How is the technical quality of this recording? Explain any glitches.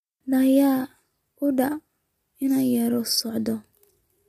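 The recording is degraded throughout by low-delay AAC compression, with plainly audible damage. The speech was likely passed through AAC-ELD, the low-delay codec of video calls, and the damage level points to a bitrate around 32 kbps. At this low bitrate the coder quantizes coarsely, so noise fills the gaps between the pitch harmonics and the voice sounds rough and grainy from start to finish.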